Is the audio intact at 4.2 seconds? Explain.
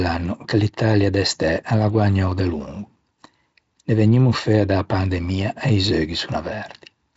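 Yes, the speech at 4.2 seconds is intact, with no fault audible at that moment.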